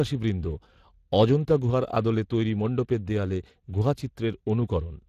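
From start to finish the speech carries Speex codec damage, and it is plainly audible. The CELP coder has too few bits to model the excitation, so voiced sounds take on a hoarse, noisy buzz. The degree of roughness fits a bitrate of about 22 kbps. Nothing reaches above 15.3 kHz. Unlike the swirling, watery smearing of a transform codec such as MP3, the damage here sits in the voice source itself, as grainy, hoarse rasp.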